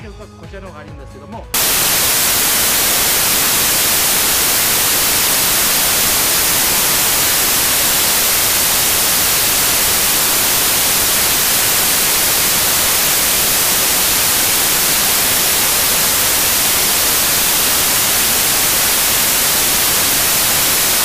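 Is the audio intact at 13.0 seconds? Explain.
No. At 13.0 s the audio has samples built from the wrong bytes, running from 1.54 s to the end. Misaligned or swapped bytes turn the fast-changing low bits into each value's bulk, giving loud, harsh broadband noise, close to white on loud sounds, unlike steady background hiss.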